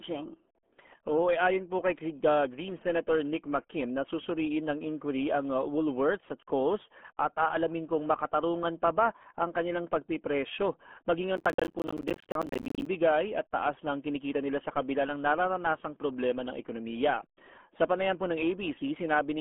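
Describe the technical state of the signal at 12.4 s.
Processor overload crackle runs from 11.37 to 12.86 s, covering 12.4 s. The processor falls behind and misses a long run of buffer deadlines, dozens of them, each around 10 ms. Every miss drops to silence, so the speech is torn into a dense, gritty crackle until the load clears.

Underneath, the RealAudio 14.4 codec is present throughout. Nothing passes above about 3.8 kHz, and the heavy coding damage, which fits an 8 kbit/s dial-up speech codec, leaves the speech muffled and gargly.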